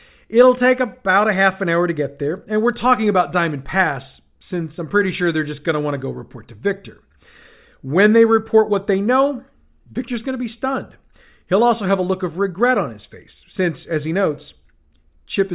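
No technical faults can be heard anywhere in the recording.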